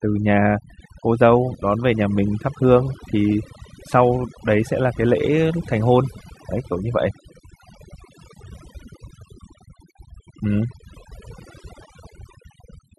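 Across the whole speech clip the background drops and breaks up into twinkling specks: overdone noise removal, where aggressive reduction also strips quieter speech detail.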